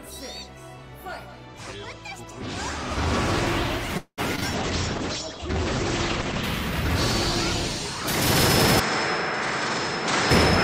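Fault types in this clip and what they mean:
call audio freeze: At 3.97 s the sound stretches into a fading buzz or hiss, with about 80 ms of silence before resuming at 4.20 s. This is likely packets held up while the jitter buffer ran empty.
short concealed packet loss: A brief smear or wobble at 4.36 and 4.40 s, where two back-to-back 20 ms holes were filled by continuing the preceding sound.
call bitrate drop: From 4.54 to 6.50 s the sound turns muffled and rough as the encoder falls from 32 to 10 kbps, with bandwidth shrinking from 20 kHz to 8 kHz.
input switched to a poorer device: From 8.80 s the sound turns duller and about 5 dB quieter, with nothing above 8.4 kHz, likely because the input moved to a narrower-band microphone.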